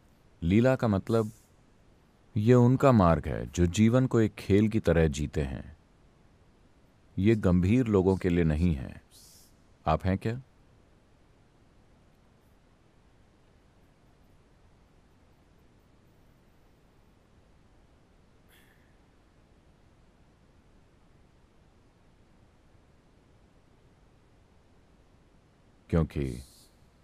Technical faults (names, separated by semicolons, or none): none